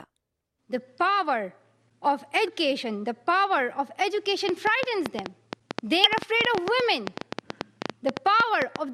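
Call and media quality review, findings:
Damaged data in a compressed stream, 2.46–2.48 s: a short glitch, a chirp, squawk, click or brief hole, where a bad patch of the coded stream gets misread or dropped. Probable component: file or transport layer upstream of the decoder.

Same damaged-data symptom again at 6.04–6.06 s. The decoder loses frame sync and hunts for the next header, possibly skipping ahead. Worth checking the source file and the network path together.

Train of clicks, 4.49–8.77 s: roughly 40 clicks at about 7.5 per second, irregular spacing, each one up to around 20 dB above the surrounding sound. They're similar in shape and carry straight through the gaps. Likely cause is interference from nearby gear or a bad connection or power supply.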